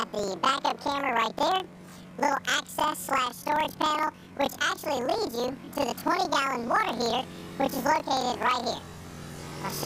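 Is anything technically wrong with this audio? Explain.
Yes. Throughout, planar audio is read as interleaved: each 42.67 ms block, fitting a 2048-sample layout, plays twice at double speed, left then right. The sound is an octave high with a 23.4 Hz flutter. A spectrogram shows doubled harmonics and vertical striping at that rate.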